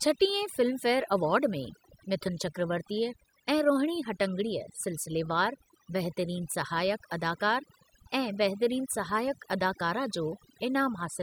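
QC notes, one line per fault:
Throughout: overdone noise removal, an overly aggressive reduction that switches off frequency bands near its noise estimate, leaving twinkling near-silence.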